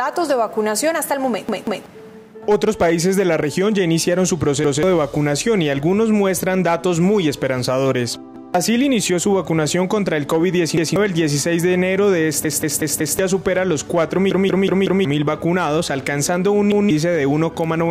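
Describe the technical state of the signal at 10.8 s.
At 10.8 s you're right in a repeated buffer, running from 10.77 to 10.96 s. New audio didn't arrive in time, so the device played the last 186 ms chunk once more. That size fits an 8192-sample buffer. You hear a stutter with a hard join, and about a fifth of a second of sound goes missing.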